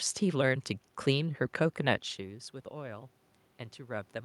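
No technical faults can be heard anywhere in this recording.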